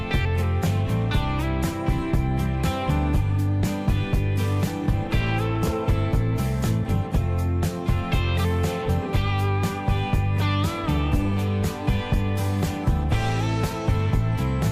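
No technical faults can be heard anywhere in this recording.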